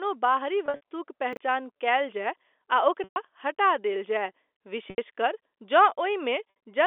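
At 0.66 to 0.81 s there's packet loss with pitch repetition: scattered gaps are patched by looping the last pitch period, giving a brief held, buzzy smear. At 1.33 to 1.37 s chunks play out of order, a 10 ms slice landing three chunks late, so you get a jumbled blip. The same pitch-repeat buzz comes back at 3.04, 4.9 and 6.5 s, each gap 60 to 120 ms long.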